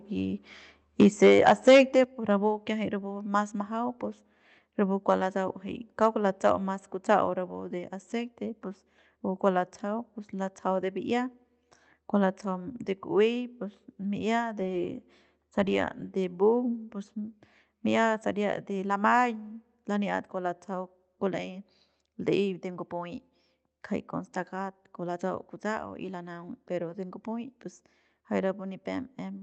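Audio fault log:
1.0–2.0 s and 6.03–6.06 s, microphone overload: peak tops are flattened, adding crackle on the loudest parts. The likely cause is input pushed about 7 dB then about 1 dB past the converter's limit.
1.03 s and 2.04 s, microphone volume stepped down: voice and background fall together by about 2 dB, then about 6 dB before "pus rapu kiajay rapu". The likely cause is the input gain being cut in steps, a level change rather than distortion.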